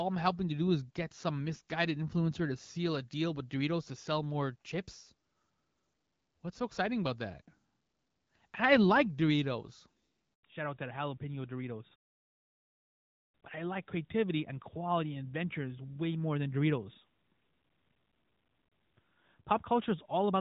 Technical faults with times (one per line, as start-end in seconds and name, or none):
10.34-10.42 handover gap
10.42-20.41 fallback to narrowband